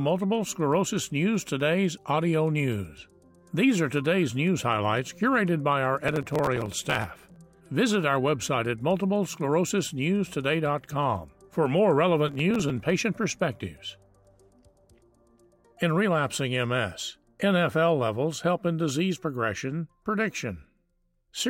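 From 5.98 to 7.37 s, and again from 12.28 to 12.79 s, processor overload crackle tears through the sound. The processor keeps missing the deadlines for very short buffers, well under a millisecond each, and every missed buffer is simply skipped. Each skip leaves a hard-edged splice, heard as gritty crackle. The waveform shows dense jagged discontinuities, and the spectrogram shows broadband vertical streaks across both spans, with far more in the longer first burst.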